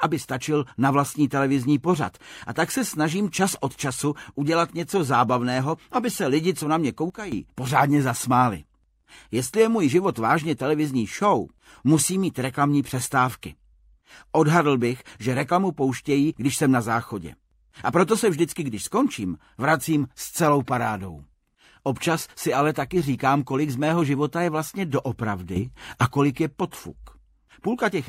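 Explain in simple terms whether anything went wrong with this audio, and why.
Sudden gain jumps at 7.1 seconds and 25.6 seconds. At 7.1 the whole sound, background hiss included, drops abruptly to a much quieter level, and at 25.6 it leaps back up by roughly the same amount. The cause is likely a volume setting being changed in one instant instead of being eased in gradually, so everything shifts loudness together, with no smooth fade between the two levels.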